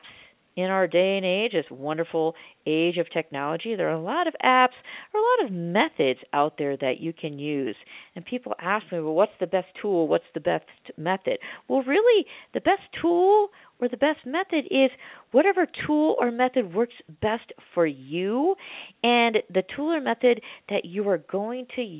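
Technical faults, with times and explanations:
No technical faults detected.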